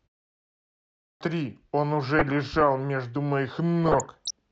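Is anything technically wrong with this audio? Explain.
Yes. From 0.57 to 1.21 s the speech comes in with a clipped start after a pause: the output device had dropped into sleep during the preceding 0.57 s of silence and took about 637 ms to wake and lock again, so the opening of the sound is swallowed and it starts abruptly, missing its first sounds.

DAB burbling appears at 2.19 to 2.61 s and again at 3.84 to 4.31 s. Weak reception let bit errors slip past error correction into the MP2 data, at roughly 0.4 and 0.7 percent, with wrong samples putting short blips of noise in single sub-bands, heard as blips of noise over the speech.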